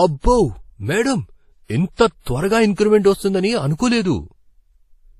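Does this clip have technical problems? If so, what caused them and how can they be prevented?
Yes. Throughout the speech, nothing is heard above 14.7 kHz, and the artefacts of different codecs are heard together. That is likely transcoding between lossy codecs: a low-rate MP3 encode was re-encoded as WMA, whose bits went on reproducing the earlier damage. Prevent it by encoding only once, directly from the original source.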